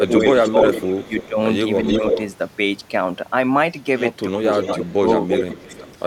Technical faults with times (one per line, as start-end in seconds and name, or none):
0.00-1.39 speech suppressed in double talk
0.16-1.26 echo leak
1.86-2.20 echo leak
4.27-4.45 speech suppressed in double talk
4.52-5.93 echo leak
4.76-4.99 speech suppressed in double talk
5.52-5.87 speech suppressed in double talk